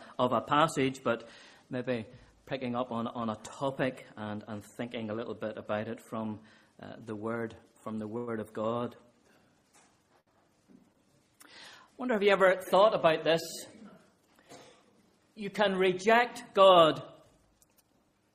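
Late packets emptied the jitter buffer, causing a short stall from a late packet at 8.17, 10.20 and 10.93 s. The sound hangs for 100, 65 and 18 ms, then resumes with nothing missing.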